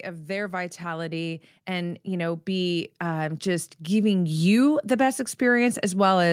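From about 0.05 s to 5.34 s, automatic gain rising lifts the level by about 11 dB as the gain control, judging the input too quiet, keeps turning up. Speech and background noise swell together; the waveform envelope widens steadily and the spectrogram brightens evenly across all frequencies.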